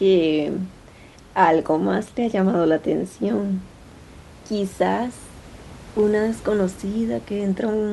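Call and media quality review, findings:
Nothing to flag on the speech here, just some room noise sitting about 23 dB under the talker, which belongs to the recording space rather than the call path.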